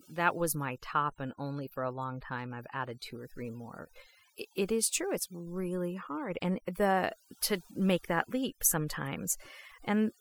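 A speech recording with overdone noise removal running from start to finish. The reduction was set so hard that it cuts individual frequency bands whenever they sit close to its noise estimate, so the background drops and breaks up into twinkling specks. On a spectrogram this shows as isolated flickering dots in the gaps and ragged, hollowed-out harmonics with missing patches in quieter parts of the voice.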